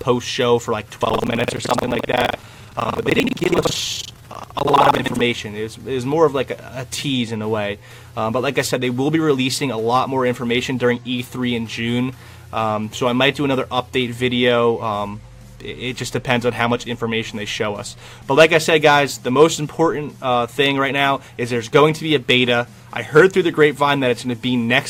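From 0.94 to 5.24 s there is buffer tearing: a steady 23.4 Hz robotic rattle, consistent with a 2048-sample buffer, where part of each period replays audio about a tenth of a second old. Unlike dropouts, it inserts stale sound rather than silence.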